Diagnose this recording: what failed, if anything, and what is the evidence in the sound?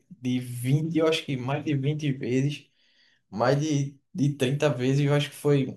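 Nothing failed; no stage shows any audible fault.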